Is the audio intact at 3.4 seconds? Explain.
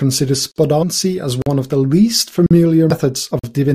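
No. From 3.39 to 3.44 s there is a gap between chunks: a 44 ms stretch of silence inserted at a join in the speech, which fits audio delivered in 1-second chunks. Nothing is lost, but the sound stops abruptly, leaving a hard-edged hole.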